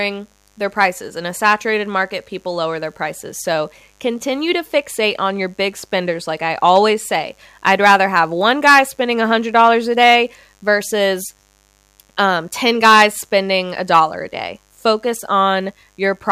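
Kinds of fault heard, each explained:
Mains buzz: A steady, raspy buzz sits under the speech throughout, built on 50 Hz harmonics from switching spikes, roughly 40 dB below the signal.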